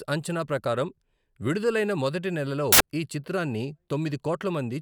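From 2.72 to 2.80 s, samples are built from the wrong bytes. The reader misassembles each value, so low, fast-changing bits become the large part. For those 80 ms, the speech gives way to a burst of loud, harsh broadband noise.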